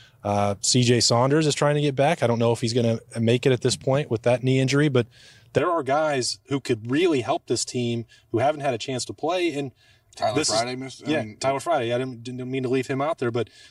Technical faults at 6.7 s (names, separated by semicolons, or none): channel delay (comb filtering)